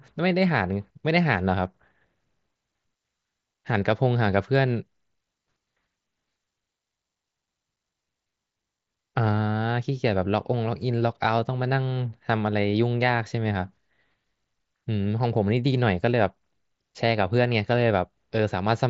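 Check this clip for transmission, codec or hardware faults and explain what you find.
No transmission, codec or hardware faults.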